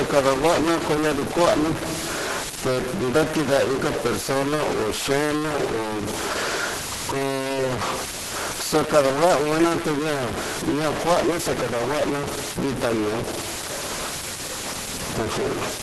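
From start to end the speech carries a noise bound to the waveform itself. It shifts with the signal's shape and sign, and it spreads into the pauses instead of falling silent between phrases. This is most likely a stuck bit: one data bit held fixed, throwing about half the sample values off by that bit's weight. Unlike steady background hiss, this noise is patterned by the audio and changes character as the speech does.

Across the whole clip there is also heavy codec damage, pointing to Opus compression at a very low rate, consistent with about 12 kbps. Nothing is present above 12 kHz, matching a super-wideband limit. The speech comes through muffled and hoarse, as expected when the encoder runs in its hybrid mode, combining speech coding below with band-filling above. Compared with MP3 damage, there are few spectral holes and little swirling; the loss shows as dullness and roughness.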